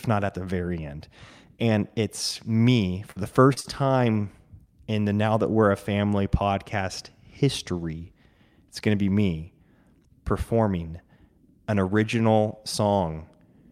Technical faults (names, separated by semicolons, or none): repeated packet loss (robotic sound)